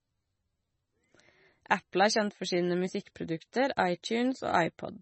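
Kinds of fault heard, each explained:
MP3 compression, throughout: the speech has no content above 8.3 kHz and a heavy, watery, swirling quality, which points to a likely low-bitrate MP3 encode, one that fits a rate near 24 kbps. With so few bits, the encoder drops the treble at a fixed cutoff and zeroes faint frequency lines. Those lines flicker on and off between frames, so the sound swirls, s sounds turn dull and chirpy, and onsets smear.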